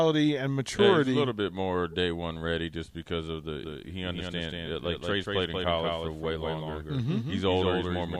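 Speech, with a doubled audio track from 3.63 s, just after "just because of the", to the end. A second full-band copy of the sound runs around 200 ms behind the original and about 5 dB quieter. It cuts in abruptly, with no decay or room colour, so it reads as a clean echo rather than reverb. The likely cause is the same signal being captured again through a slower path and mixed back in.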